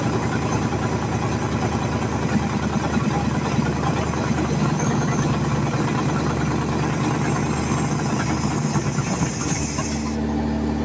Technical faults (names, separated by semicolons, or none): none